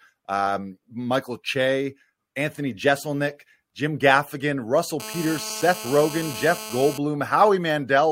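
From 5.0 to 6.98 s, GSM phone buzz cuts across the speech. A nearby 2G handset's 217 Hz call bursts get rectified, producing a raspy harmonic buzz about 12 dB below.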